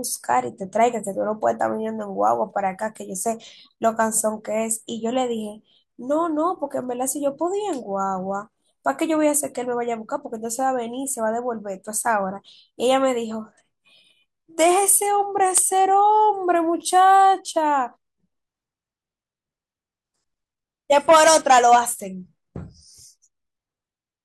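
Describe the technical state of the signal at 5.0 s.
At 5.0 s the speech signal is intact, with no dropout, distortion, glitch or other technical fault to be heard at that moment.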